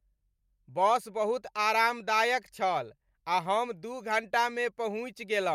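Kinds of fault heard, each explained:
No faults can be heard.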